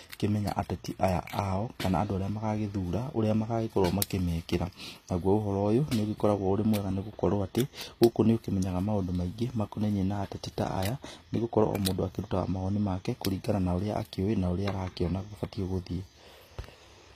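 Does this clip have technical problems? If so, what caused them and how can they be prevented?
Yes. Throughout the speech, s sounds come out gritty and metallic, the treble stopping near 15.5 kHz. That points to likely HE-AAC compression at a low rate, around 24 kbps: the treble is rebuilt from copied lower bands. Unlike a plain low-pass, the top stays bright but false. Encoding at a higher bitrate with full-band AAC prevents it.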